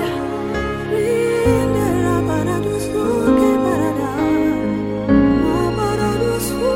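Listening through the audio, nothing stood out as a technical fault at any point.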